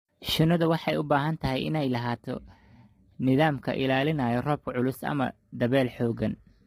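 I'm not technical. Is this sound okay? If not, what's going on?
No. All the way through, the speech sounds rough and grainy, with a hiss-like fuzz sitting between the tones of the voice and a dull or slightly artificial quality at the top end. That is most likely low-delay AAC compression, the kind used for video calls. It chops sound into very short slices to keep the delay down, which blurs the voice's pitch detail, and with too little data to work with, the damage here is heavy.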